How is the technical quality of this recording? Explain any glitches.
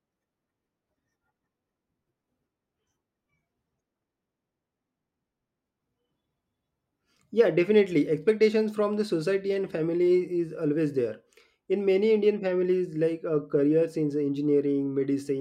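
No technical faults or glitches can be heard here.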